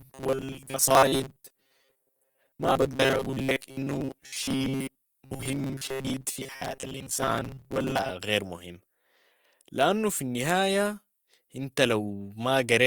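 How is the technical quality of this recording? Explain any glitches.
The technical quality is poor for the first two-thirds. From 0.01 to 8.1 s, audio likely arrived too seldom, so roughly 7.5 ms chunks were replayed in place of most of the real signal. This produces robotic sound from repeated short buffers, a rigid metallic buzz at 134 Hz over the speech, which clears just before "غير مهم".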